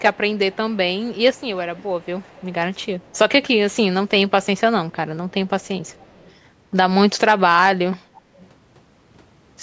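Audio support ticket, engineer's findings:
Echo leak: faint delayed copy of the speech, about 30 to 35 dB down, trailing by 332 ms at 0.14–0.39, 0.7–1.42, 1.75–2.53, 2.84–3.76, 4.43–4.96, 5.29–6.34 and 8.14–8.47 s. Likely the far-end speakerphone's echo canceller letting residue through.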